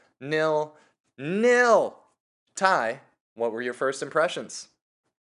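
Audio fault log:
No fault is heard in this speech clip.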